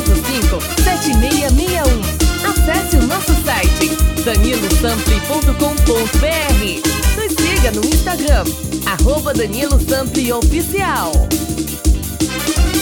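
No technical faults are audible.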